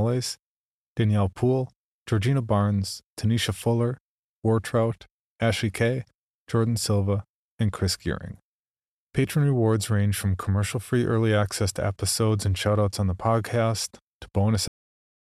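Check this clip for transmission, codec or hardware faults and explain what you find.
There is one fault, a cut-off end. At 14.68 s the speech stops abruptly in the middle of a sound and drops straight to digital silence for the remaining half-second or so, with no natural decay or trailing room sound. The cause is that the final buffers of audio were never written out or played back, so the recording ends wherever the last delivered block happened to stop rather than where the speech finished.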